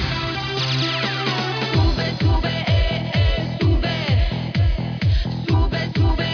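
No technical faults can be heard anywhere here.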